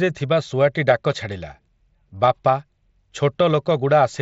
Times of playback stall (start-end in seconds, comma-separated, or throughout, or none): none